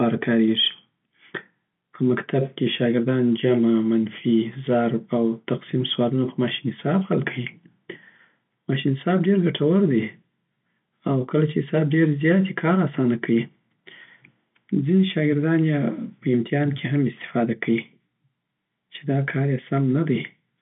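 No faults can be heard in this telephone-band speech.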